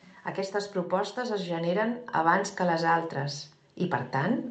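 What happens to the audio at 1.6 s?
At 1.6 s the level is partway through an automatic gain rising that runs from 0.51 s to 4.48 s. An automatic gain control judged the input too quiet and kept turning its gain up, about 8 dB over the span. Voice and background swell together, so the room noise climbs with the speech. On the waveform the envelope widens steadily. On a spectrogram the whole band, which stops near 8 kHz on this call path, brightens evenly over time.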